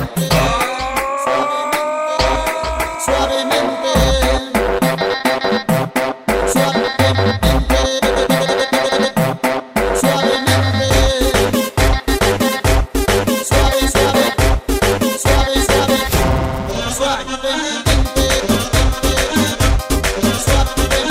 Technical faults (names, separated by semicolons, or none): chunks out of order